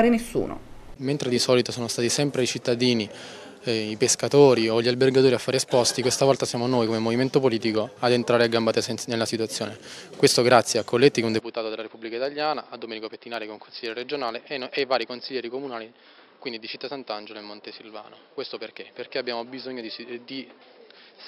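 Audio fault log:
11.40–21.28 s, input switched to a poorer device: at 11.40 s the sound abruptly turns duller and boxier, with nothing above 5.3 kHz, drops about 10 dB, and picks up new background noise roughly 30 dB below the signal, with no gap at the change. This is most likely a changeover to another microphone or a headset's call profile. A filter or EQ change would alter only the tone, but here level, bandwidth and noise floor all shift at once and stay changed to the end.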